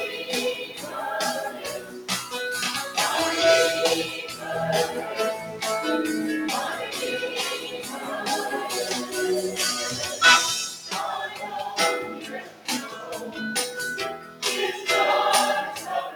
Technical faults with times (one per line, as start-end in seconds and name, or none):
0.00-16.15 noise suppressor applied to music or sounds
0.64-0.92 sound cut by the noise suppressor
1.50-2.09 sound cut by the noise suppressor
7.63-8.08 sound cut by the noise suppressor
11.28-11.46 sound cut by the noise suppressor
12.19-13.10 sound cut by the noise suppressor
14.17-14.42 sound cut by the noise suppressor